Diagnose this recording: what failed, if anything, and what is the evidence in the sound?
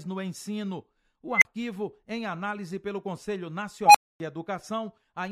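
An unstable filter in the processing stage ran away. Its feedback grew without limit, so squeals near 2 kHz at 1.34 s and 700 Hz at 3.86 s swell within 80 to 90 ms, clip, then drop out for 35 and 255 ms.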